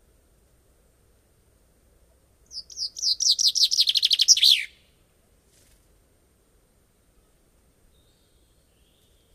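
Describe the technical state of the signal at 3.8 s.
Right around there, 3.76 to 3.87 s, you get frames out of order: two short neighbouring runs got swapped, so that bit flutters oddly.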